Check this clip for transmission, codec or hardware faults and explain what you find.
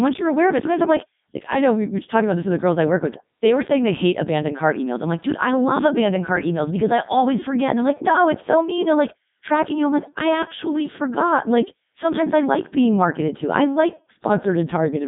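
The speech passes through a Codec 2 vocoder from start to finish. The codec sends only pitch, voicing, energy and a coarse spectral envelope, and rebuilds the voice from sine waves, so the original waveform is lost. The degradation is heavy, and the robotic, buzzy timbre fits Codec 2's 3.2 kbit/s mode. The audio sits in a narrow line band of about 150 Hz to 3.7 kHz, with nothing above 3.8 kHz.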